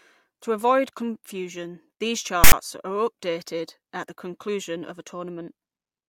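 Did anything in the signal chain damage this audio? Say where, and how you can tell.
Yes, at the storage stage. From 2.44 to 2.53 s, between "avoid confusion these" and "are updated at the", file tags are played as audio: text bytes decoded as samples give a hard-edged, one-sided rasp, then zero padding drops to silence.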